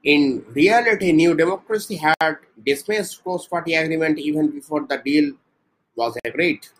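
Clock slip clicks run from 0.37 to 6.51 s: faint, regular ticks about every 0.3 s, around twenty in all, each a single dropped or repeated sample, likely from two unsynchronised clocks drifting roughly 70 ppm apart.

A gap at a join of encoded pieces opens at 2.14 to 2.21 s (68 ms) and again at 6.20 to 6.25 s (53 ms). Each is a smeared silence in the speech, left by untrimmed encoder delay and end padding, before the sound carries on where it stopped.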